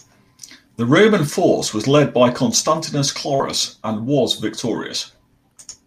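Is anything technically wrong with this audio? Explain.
Yes. At about 3.35 to 3.41 s, just before "and was", the speech briefly smears into a short, wobbly blur instead of crisp articulation. This is short concealed packet loss: roughly 40 ms of the call arrived too late or not at all, so the receiver invented about 41 ms of stand-in audio by extending the preceding sound, then cross-faded back into the real signal once it resumed.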